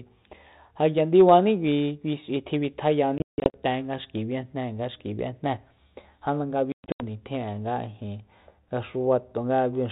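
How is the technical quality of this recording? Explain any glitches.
Two bursts of packet loss on an ADPCM call break up the speech, from 3.18 to 3.57 s and from 6.72 to 7.02 s. About 260 ms and 220 ms go silent in hard-edged gaps, the longest lasting 160 ms and 120 ms. Because the receiving decoder's adaptive predictor and step size lose track of the sender, the speech returns with brief, slight distortion. That lingering recovery distinguishes it from a clean dropout.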